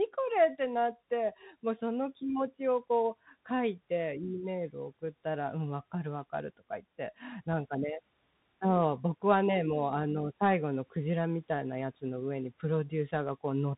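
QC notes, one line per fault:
Throughout: Bluetooth CVSD headset codec. The speech is confined to a narrow band with nothing above 3.8 kHz, and the codec damage is plainly audible. The one-bit up/down coding with an adapting step, which fits a 64 kbps stream, leaves fast, loud high content smeared and roughened, with a fine granular hiss underneath. On a spectrogram, energy stops at a hard ceiling near 3.8 kHz with a grainy noise floor below it. On the waveform, steep edges look slew-limited.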